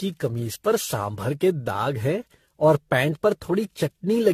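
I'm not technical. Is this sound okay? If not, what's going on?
No. The whole clip has generation loss: the speech sounds swirly, hollow and smeared, with blurred consonants, most likely from being re-saved in a compressed format around fifteen times. A single low-quality save would sound dull, but not this watery.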